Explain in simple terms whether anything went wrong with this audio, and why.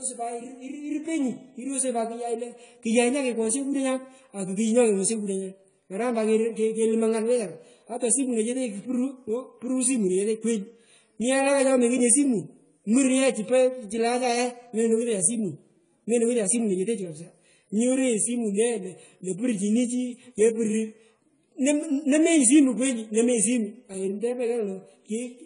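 The speech was most likely squeezed through AAC compression at a low data rate, so the encoder threw away detail it judged least audible. From start to finish, the sound is cut off above 10 kHz, leaving it dull and muffled. The damage is plainly audible, with a smeared, warbling quality on held sounds and a fizzy edge on hissing consonants like s and sh.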